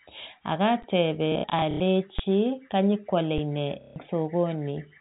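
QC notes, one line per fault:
0.82 s, 2.19 s, 3.38 s: underrun with held sample. Sound freezes flat for about 12, 8 and 7 ms (the first fits a 512-sample buffer), then resumes in place, so it ends softly, unlike packet repeats.
1.32–1.80 s: packet loss with last packet repeated. About 240 ms lost in scattered runs (longest 90 ms); repeated packets buzz robotically instead of going flat.
3.81–3.96 s: packet loss with last packet repeated. A 150 ms run of repeated packets gives a stuttering buzz, not the silent flat hold of an underrun.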